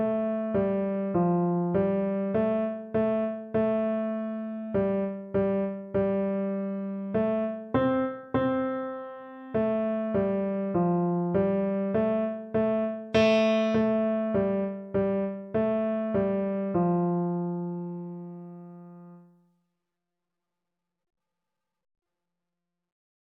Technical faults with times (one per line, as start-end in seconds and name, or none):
none